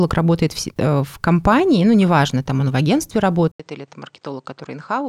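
After "там он в агентстве", at 3.52 s, the speech cuts out for 80 ms. It returns about 10 dB quieter and duller. Nothing sounds above 8.8 kHz, and a faint new background noise appears. This is likely an input switched to a poorer device, lasting to the end.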